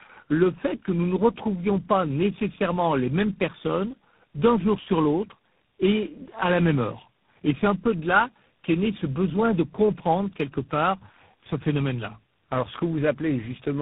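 Tandem speech coding affects the speech from start to finish. The signal passes through three speech codecs in a row, with the roughness pointing to something like AMR-NB, then GSM full rate, then G.726 at a low rate. Each codec re-encodes the previous one's already damaged output, so the errors compound. Nothing remains above 3.8 kHz, giving a muffled, boxy tone, and the accumulated quantisation leaves the speech grainy and warbly.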